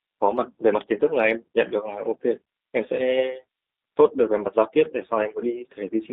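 From start to finish the speech sounds thin, slightly rough and synthetic, confined to about 300 Hz to 3.7 kHz. This is G.729 codec damage, fitting an 8 kbit/s stream: each 10 ms frame is rebuilt from a vocal tract filter, pitch predictor and sparse pulses.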